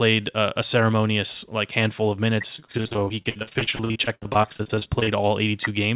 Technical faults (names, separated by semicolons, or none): repeated packet loss (robotic sound)